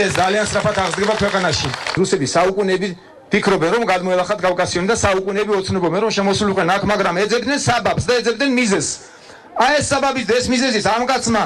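No technical faults can be heard anywhere in the recording.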